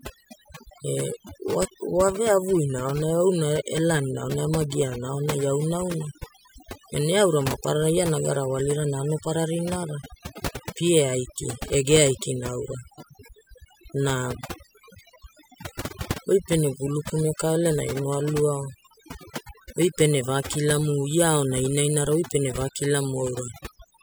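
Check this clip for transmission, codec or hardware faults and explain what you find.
One fault runs through the whole clip: overdone noise removal. From start to finish the pauses drop to an unnatural near-silence scattered with twinkling specks, and the speech has its softer edges missing. A noise reduction stage set far too aggressively caused this. Every frequency band that came close to its noise estimate was pushed down hard or shut off, taking quiet parts of the speech along with the noise.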